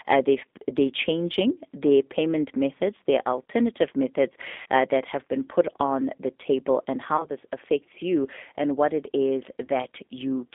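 Throughout, the speech passes through a G.729 codec, which fits 8 kbit/s. The line carries only about 250 Hz to 3.6 kHz. The codec rebuilds each 10 ms frame from a vocal tract filter, a pitch predictor and a few pulses. The damage is plainly audible as a rough, synthetic quality.

At 4.62 to 4.66 s, after "methods their alternative methods" and before "uh that have been", there is VoIP packet loss concealed by the speech codec. About 40 ms is lost, which fits four frames. More gaps follow. The first is at 7.17 to 7.27 s, between "on the table and" and "this affects you and", with 20 ms lost. The second is at 9.65 to 9.70 s, after "and what it is", with 30 ms lost. In each gap the decoder extends its last pitch and filter while lowering the gain. The missing stretch becomes a fading buzzy tone or coloured noise. The voice stays weak or distorted briefly after packets resume.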